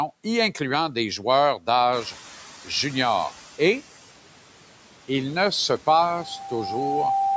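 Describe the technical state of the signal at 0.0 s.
At 0.0 s the speech signal is intact, with no dropout, clipping or other fault present.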